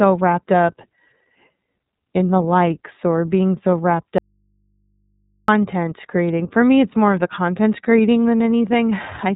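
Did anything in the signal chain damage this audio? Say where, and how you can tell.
Yes. The codec stage: speech runs through the iLBC codec for the whole clip. Nothing passes above about 3.8 kHz, and the speech sounds rough and synthetic, plainly audible frame-coding damage that fits iLBC's 30 ms, 13.33 kbps mode, where each frame's excitation is coded independently.

The signal also suffers an audio dropout to a faint residue, right after "or being so wrapped", from 4.18 to 5.48 s. The speech cuts abruptly for 1.3 s, leaving only hum roughly 45 dB down, which points to the analogue wiring stage, likely a broken connection with the downstream input still live.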